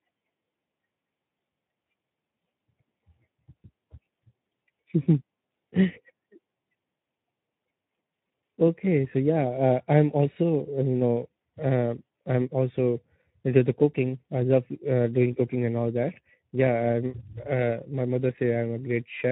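Throughout, the speech carries Speex codec damage: a starved CELP excitation leaves it plainly noisy and hoarse, which fits a low setting near 11 kbps.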